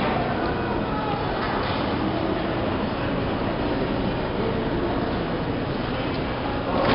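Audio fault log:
throughout, 4-bit ADPCM compression: a gritty hiss rides on every loud passage and drops away when the sound goes quiet, because each sample is coded as a coarse 4-bit step from a prediction, so the error scales with level. Sharp attacks smear into rough distortion where the step size lags. Unlike a fixed noise floor, the grit tracks the signal. The dull top end, with nothing above 5.3 kHz, fits a low-rate stream near 44 kbps.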